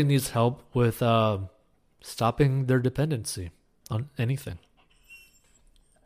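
A speech recording with no technical fault to point to. There is nothing here that calls for a time or a cause.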